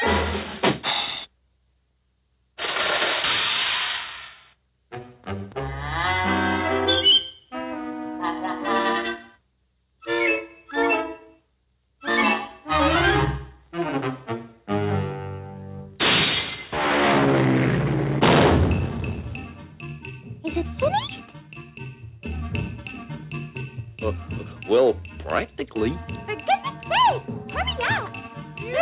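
Nothing technically wrong can be heard anywhere in the recording. No dropouts, distortion or other problems turn up at any point.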